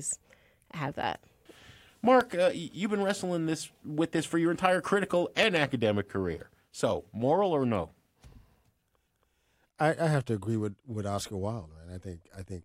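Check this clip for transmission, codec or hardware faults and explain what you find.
Loud pops interrupt the speech twice. At 2.21 to 2.23 s, just before "uh you've been wrestling", a single pop stands about 10 dB above the speech. At 5.43 to 5.59 s, between "for your entire critical" and "career so moral or", two pops about 15 dB above the speech follow in quick succession. The likely cause is a sudden voltage pulse from a plug, switch, static or driver glitch, shaped by later circuitry. Each pop sounds like a sharp thump over the speech, which continues underneath, and shows as a tall waveform spike and a vertical broadband stripe on a spectrogram.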